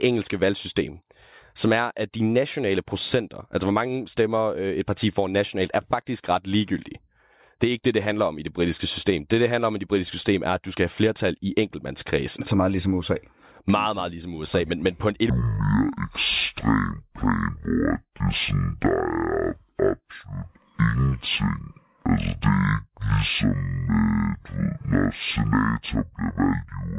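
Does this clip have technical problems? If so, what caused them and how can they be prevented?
Yes. From about 15.30 s to the end, the speech suddenly drops a full octave (12 semitones) and plays at half speed. That's the classic wrong sample rate fault: the samples are clocked out at a different rate than they were captured at, with no conversion, so pitch and tempo shift together by the same ratio. A halving like this fits audio recorded at 16 kHz being played back as if it were 8 kHz. To prevent it, make sure the playback or processing stage reads the stream's actual rate, or resamples explicitly whenever the rates differ.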